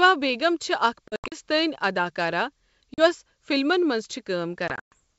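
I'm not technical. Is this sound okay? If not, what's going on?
No. The speech briefly drops into hard-edged silent gaps near 1.08 to 1.36 s, 2.94 to 3.02 s (just before "فِلمَن مَنٛز") and 4.68 to 4.93 s, returning slightly distorted. This is packet loss on an ADPCM call: pieces of the call went missing, and the receiving end lost track of the sound and needed a moment to catch up.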